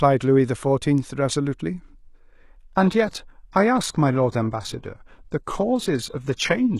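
At 2.29 s the speech abruptly drops to a lower-bitrate stream until the end. Treble turns thin and synthetic, artefacts rise, with no gap, which points to HE-AAC near 16 kbit/s.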